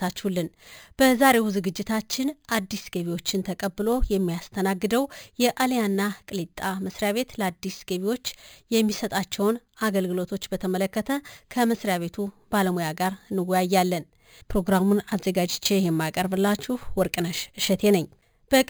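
The clip is speech, and it has imaging from sample-and-hold upsampling throughout. Each original sample was simply repeated to reach the higher rate, with no smoothing filter. This leaves mirrored copies of the spectrum. The lowest copy sits between about 5.5 and 11 kHz, which points to an original rate near 11 kHz. It is about 16 dB below the speech. It is heard as a bright metallic fizz that rises and falls with the speech.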